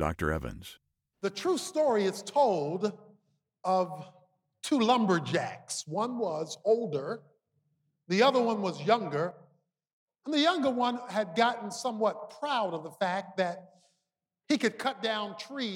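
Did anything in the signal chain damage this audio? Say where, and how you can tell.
Yes. From 9.31 to 10.09 s, and again from 14.84 s to the end, the level drops abruptly by about 6 dB, and in the first span recovers just as sharply, with no fade or pumping. That is the signature of one channel dropping out before the mono sum, likely an intermittent connection in the analogue wiring or a connector. Material common to both sides halves, while anything present only on the lost side vanishes entirely. A gain dip or compressor would instead lower everything evenly and move gradually.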